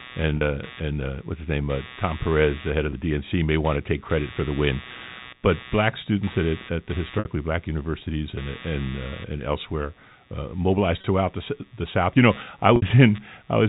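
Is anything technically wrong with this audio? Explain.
Yes, two faults are present in this telephone-band speech, which is carried over G.711 coding with nothing above 4 kHz.

Computer activity noise runs through the whole clip as a buzzy chirping at roughly 150 pulses per second, roughly 20 dB below the speech. Processor or peripheral load disturbs the shared audio ground. On a spectrogram it shows as evenly spaced vertical striations, and on a waveform as fine periodic spikes, even in pauses.

Packet loss with pitch repetition occurs five times: at 0.37 s (40 ms, just before "uh and uh what's"), 2.90 s (20 ms, after "the head"), 7.19 s (60 ms, between "students at at the" and "black universities and and"), 11.01 s (30 ms) and 12.76 s (60 ms). The receiver fills each gap by repeating the last pitch cycle, which gives a brief held, buzzy tone. On the waveform this appears as identical repeated cycles that shrink in amplitude. 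On the spectrogram it shows as flat, unchanging harmonics.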